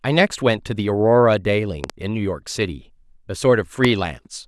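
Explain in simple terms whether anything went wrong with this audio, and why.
Something did go wrong here. There is a loud pop twice in this speech clip. Between 1.84 and 1.92 s you hear two sharp pops in quick succession. At 3.85 s there is one more. Each is much louder than the speech, which carries on underneath. The likely cause is a sudden jolt of electricity, such as a plug, a switch or static, adding a brief spike to the signal.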